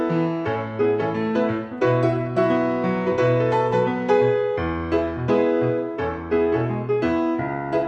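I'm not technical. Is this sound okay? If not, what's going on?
Yes, nothing wrong here.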